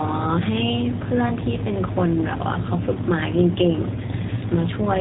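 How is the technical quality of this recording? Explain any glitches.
The recording is clear enough to follow, but coding damage runs throughout and there is one brief dropout near the end.

The G.729 codec colours the whole clip. Speech is rebuilt from a vocal tract model and sparse pulses, fitting an 8 kbit/s stream. Nothing above 4 kHz survives, and the voice sounds rough and synthetic.

VoIP packet loss concealed by the speech codec occurs from 4.06 to 4.11 s. About 20 ms went missing, fitting a single lost packet. The decoder stretched its last sound and faded it out. The voice stays weak or distorted for tens of milliseconds as it recovers.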